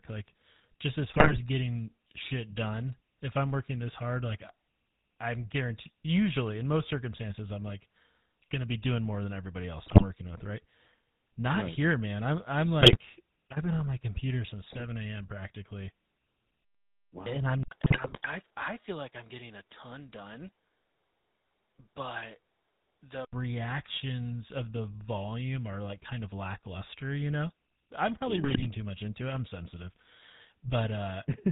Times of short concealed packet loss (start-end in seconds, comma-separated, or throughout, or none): none